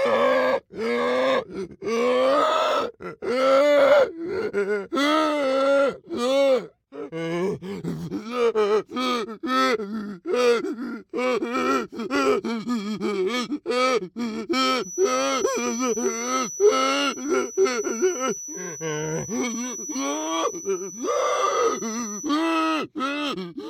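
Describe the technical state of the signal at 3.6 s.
The signal at 3.6 s is intact, with no audible fault at that moment.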